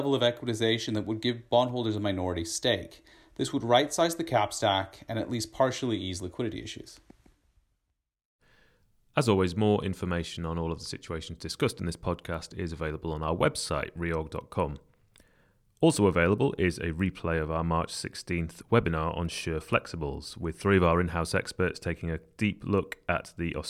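No technical faults are audible.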